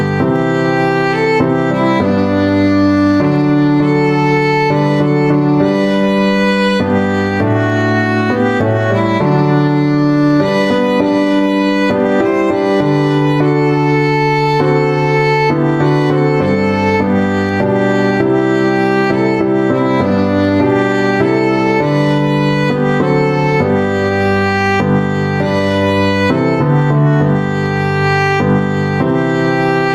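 Gain pumping runs throughout: the gain ducks by around 5 dB under loud moments, likely from a fast limiter on excess gain, unlike a gate's abrupt silence.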